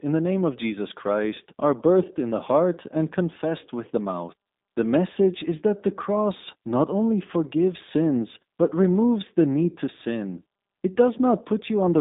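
For the whole clip, the speech has passed through the G.729 codec (the G.729A variant), and the sound fits its 8 kbit/s rate. Instead of sending the waveform, the encoder keeps a vocal tract filter, a pitch predictor and a sparse set of pulses for each 10 ms frame, and the decoder rebuilds the speech from those. The result is plainly audible codec damage, a rough, synthetic quality, with the band held to about 200 Hz to 3.7 kHz.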